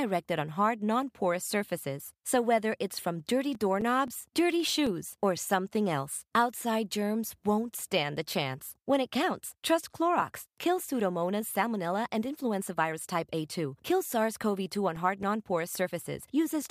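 CD scratch ticks run from 3.02 to 5.13 s, after "whether it's", and again from 13.91 to 16.02 s. Each burst has nine clicks of a few milliseconds, about four per second, one per disc turn where error correction fails. They appear as thin vertical spectrogram lines and tiny waveform gaps.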